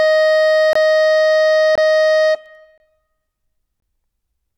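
At 0.73–0.75, 1.75–1.78, 2.78–2.80 and 3.80–3.82 s the music drops into a 23 ms silence, a gap between chunks repeating every second. No material is lost, but the sound is interrupted at each join. A waveform shows flat near-silent notches, and a spectrogram shows narrow full-height blank columns.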